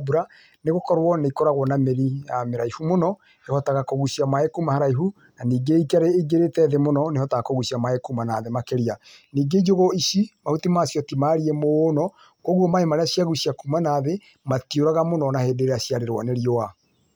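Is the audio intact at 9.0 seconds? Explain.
Yes, the speech at 9.0 seconds plays through intact, with no audible fault at that moment.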